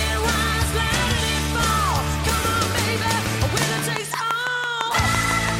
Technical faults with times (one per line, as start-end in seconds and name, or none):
3.62-5.50 train of clicks